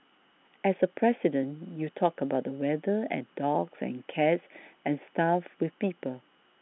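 No technical faults can be heard anywhere in the speech. The line itself is audible as G.711 telephone coding, which holds the sound to a band of 150 Hz to 3.5 kHz with nothing above 3.8 kHz.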